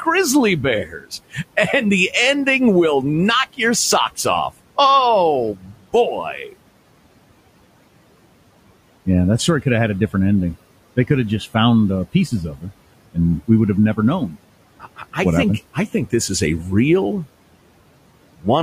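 Brief stretches of speech sound swallowed and faint at 0.85 to 1.12 s, dipping by about 18 dB, then at 5.55 to 5.76 s and between "would have never known" and "think happened" at 14.8 to 15.16 s, both by about 11 dB. This is speech cut by the noise suppressor: it mistook these quieter speech moments for noise and pulled them down for about 0.15 to 0.2 s each, even though the room noise sits about 20 dB below the speech.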